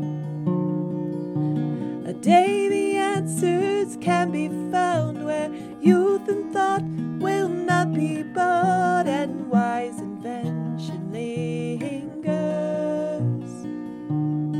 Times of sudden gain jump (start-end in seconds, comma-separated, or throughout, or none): none